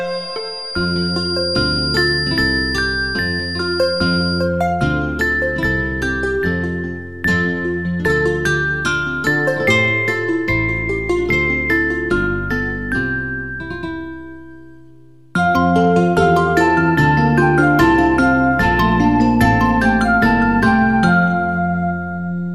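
The loudspeaker-to-microphone loop was likely sitting right at the edge of feedback from 0.0 to 4.51 s, holding a single tone at 4.8 kHz without running away. This feedback whistle sounds thin and steady, roughly 10 dB under the audio, swelling and fading slowly in level.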